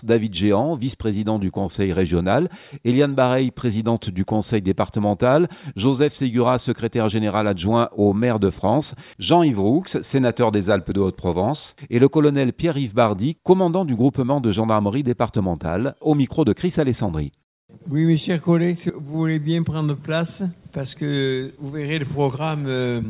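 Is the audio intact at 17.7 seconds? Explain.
Yes, at 17.7 seconds the audio plays through cleanly, with no dropout, click, distortion or other fault.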